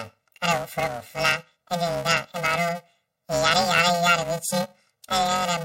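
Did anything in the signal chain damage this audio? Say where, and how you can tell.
Yes. The speech has a robotic buzz at about 345 Hz from start to finish, with no clear octave shift. This points to planar audio read as interleaved at the sample-format conversion stage, in short blocks of about 2.9 ms, which fits 128-sample blocks.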